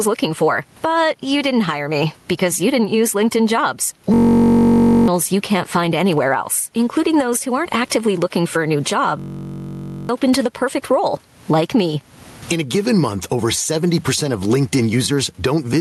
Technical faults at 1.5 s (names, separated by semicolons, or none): gain pumping